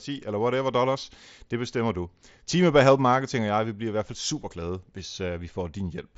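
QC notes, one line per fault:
No faults found.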